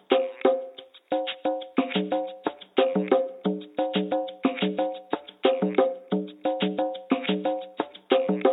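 No technical faults can be heard anywhere in this audio. Nothing in it points to a problem in how it was captured, processed or delivered.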